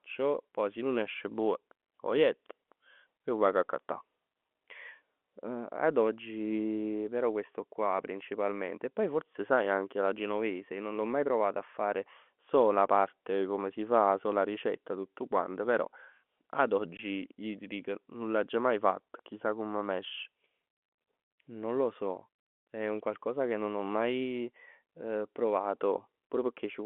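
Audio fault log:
16.97–16.99 s, packet loss filled with silence: a 20 ms hard-edged gap, consistent with two 10 ms packets dropped, falls just before "ij t'" over the telephone-band audio.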